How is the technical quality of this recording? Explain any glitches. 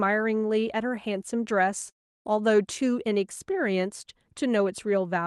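The recording has one clear glitch, a gap in the middle of the speech. The signal runs through a call codec whose content tops out at about 12 kHz.

From 1.89 to 2.27 s there is a long network dropout, roughly a third of a second of audio that never arrives, likely from packets lost in transit. The receiver stretches the last sound into a buzzy fill that fades to near silence, then speech resumes with that stretch missing. A waveform shows a tapering envelope ending in a flat section. A spectrogram shows smeared, repetitive bands fading into an empty column before normal speech texture abruptly returns.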